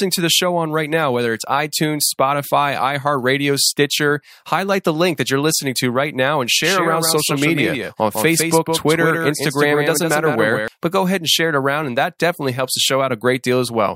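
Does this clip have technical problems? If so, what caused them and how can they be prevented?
Yes. From 6.62 to 10.68 s there is a doubled audio track: a full-band copy trails about 150 ms behind at roughly 5 dB lower. Unlike room echo, it starts and stops abruptly, with no decay or reverberant colour, likely because a second, slower capture path was mixed in. Prevent it by routing the source through a single path and muting any duplicate inputs or monitoring returns before recording.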